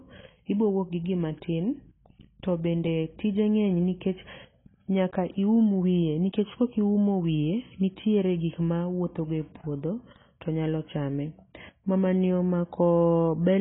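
Throughout, the speech sounds dull and smeared, with nothing above 3.8 kHz and a flat ceiling on the spectrogram. This is likely heavy AAC compression, fitting about 16 kbps.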